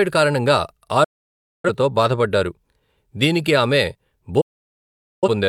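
At 1.04 to 1.70 s and again at 4.41 to 5.28 s, a digital broadcast dropout mutes the speech with a fast 8 ms fade. The receiver lost valid frames, so about 0.6 s and 0.81 s of programme vanish. Unlike concealment glitches, nothing is smeared or repeated; speech simply resumes further on.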